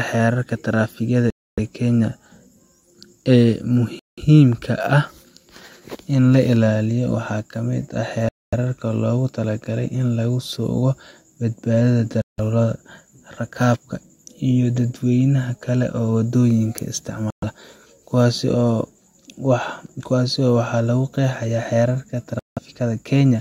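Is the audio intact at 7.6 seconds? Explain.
Yes, the audio is intact at 7.6 seconds, with no fault audible there.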